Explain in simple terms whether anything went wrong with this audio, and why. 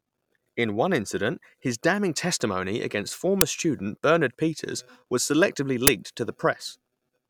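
An uninitialised buffer was played twice: the system sent memory to the output before audio was written into it, so leftover data became sound. That gives brief, loud bursts of digital noise: 5 ms at 3.41 s, after "his damning testimony against", and 10 ms at 5.87 s, after "was selectively".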